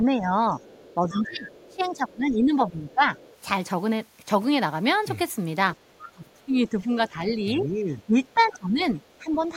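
From 0.05 to 3.11 s the speech is suppressed in double talk. It dips by up to around 15 dB, about two seconds of it all told, likely because the echo canceller couldn't separate the talker from the loudspeaker echo and turned both down. Within that, from 0.59 to 1.89 s, the other side's voice leaks through, likely residual echo the canceller missed, sitting around 20 dB under the speech. A fainter scrap, about 30 dB down, follows at 2.90 to 3.38 s, then another around 20 dB down at 5.74 to 6.10 s. From 6.11 to 9.39 s the same double-talk suppression returns, with dips again reaching about 15 dB, and from 8.28 to 9.42 s a very faint leak, roughly 40 dB below the speech, rides underneath.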